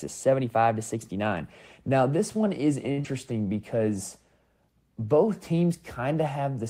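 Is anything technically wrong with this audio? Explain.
Yes, there are two small network glitches right after "this one is."

From 2.91 to 2.99 s there's a short stall from a late packet. The jitter buffer ran dry, so the receiver held the last sound for about 57 ms until the packet showed up, then carried on where it left off. Nothing's lost, but the speech drags and adds 57 ms of delay.

Just after, from 3.01 to 3.07 s, there's a short concealed packet loss. About 40 ms of audio never arrived, and the decoder patched roughly 34 ms by extending the preceding sound before blending back in, which you hear as a quick smear or wobble.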